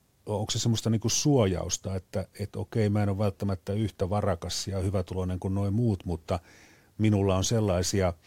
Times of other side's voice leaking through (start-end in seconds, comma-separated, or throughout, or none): none